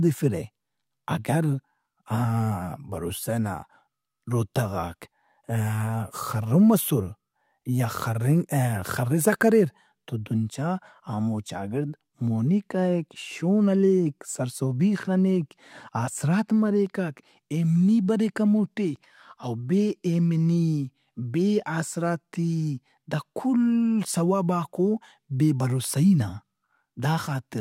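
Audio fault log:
No technical faults detected.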